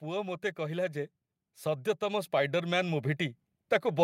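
A speech recording with automatic gain rising from 0.05 s to the end of the clip. The level climbs steadily throughout rather than settling, and the background noise floor rises in step with the voice. That shared swell points to an automatic gain control that judged the input too quiet and kept increasing its gain, rather than the talker getting louder or moving closer to the microphone.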